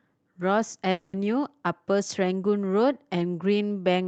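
From 0.91 to 1.16 s the sound smears into a fading buzz for roughly a fifth of a second, which is likely a long network dropout covered by concealment. Right at its tail, around 1.13 to 1.15 s, one 20 ms lost packet is rebuilt from error correction, so it comes through rougher and noisier.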